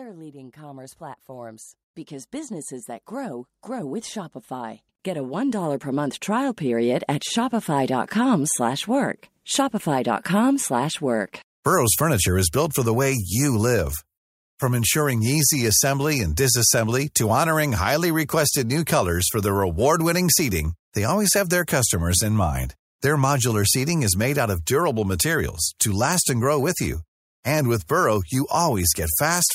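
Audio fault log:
0.29–6.9 s, automatic gain rising: the level of this speech climbs steadily by about 20 dB across roughly six and a half seconds, with the voice and the background noise floor swelling together rather than the voice alone getting louder. That joint rise is the mark of an automatic gain control judging the input too quiet and winding its gain up slowly, so everything entering the microphone path is lifted by the same amount.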